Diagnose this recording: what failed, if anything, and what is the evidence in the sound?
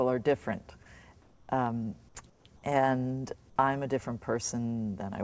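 Call processing: at 1.22–1.49 s and 2.30–2.45 s the background becomes featureless noise about 4–6 dB quieter, not gated silence, likely comfort noise in place of the background.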